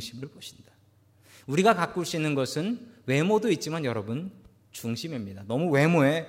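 A speech recording with a brief click-like buzz at 4.80 s, where a tiny 2.9 ms slice sounds four times in a row with hard joins. This is a repeated buffer: fresh audio arrived late, so the device replayed its last chunk, which fits a 128-sample buffer, while almost nothing is lost.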